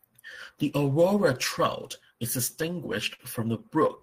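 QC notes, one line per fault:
3.14–3.22 s short stall from a late packet: the buffer ran dry, so the last sound is held 49 ms, a flat smeared spectrogram band; nothing lost, everything after runs 49 ms late.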